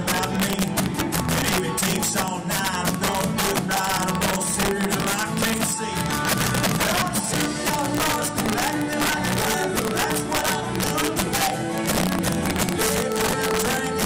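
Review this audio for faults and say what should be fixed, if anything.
Integer overflow runs through the whole clip. The signal is driven about 6 dB past full scale, and instead of being limited, the peaks wrap around to the opposite sign. Each wrapped sample jumps across the entire range, so the loudest moments break into harsh, violent cracks far sharper than ordinary clipping. A small share of samples is affected, a couple of percent, but every one of them lands on a peak. To prevent it, use saturating arithmetic or a limiter before conversion to integer, and leave headroom in the gain stage.

Clock drift buffer slips are the likely cause of a regular click that appears while sound is present. It repeats every 1.25 s from 1.25 s to 13.78 s, about ten times in all. The steady spacing points to two devices running on independent clocks. A mismatch of around 500 ppm lets the intermediate buffer fill or drain until a block of roughly 30 samples is dropped or repeated, and each of those discontinuities is heard as a pop. 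To prevent it, lock both devices to a common clock or add adaptive asynchronous sample-rate conversion between them.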